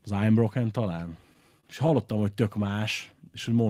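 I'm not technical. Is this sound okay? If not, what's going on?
No. From 1.33 to 2.38 s there are repeated stalls (stutter): the speech catches nine times, each gap at most 27 ms, as late-arriving data is patched over. Then from 3.31 to 3.64 s a jitter buffer slow-down stretches the speech to about 91% speed, adding 38 ms, so it drags without changing pitch.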